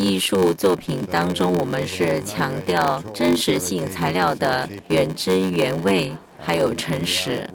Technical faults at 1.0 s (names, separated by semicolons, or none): block size mismatch (padded)